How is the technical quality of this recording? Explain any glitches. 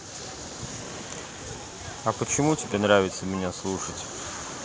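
The speech carries a feedback echo between two devices from 0.8 to 3.1 s. Two devices in the same room share the call. One plays what the other's microphone sent, and that microphone picks it up again. Each echo canceller removes only its own device's playback, so the loop survives. Words come back roughly every 0.4 seconds, thinner and more ringing each pass. The loudest repeat sits about 15 dB below the speech. The audio stops at 8 kHz.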